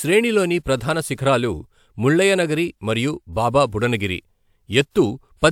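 There are no technical faults to describe at any point in the audio.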